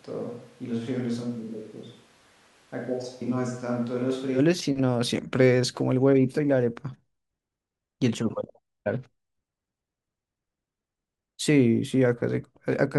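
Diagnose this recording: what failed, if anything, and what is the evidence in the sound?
At capture, the close mic likely failed: a switch to a distant microphone until 4.37 s leaves speech roomy, thin and about 10 dB quieter, then abruptly close.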